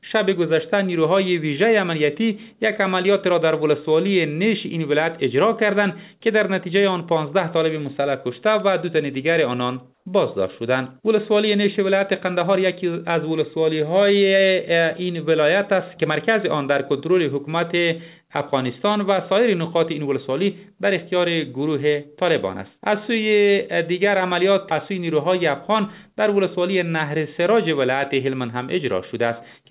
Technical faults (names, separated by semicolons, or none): comfort noise in place of the background